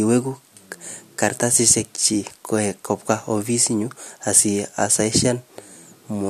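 No technical faults are audible.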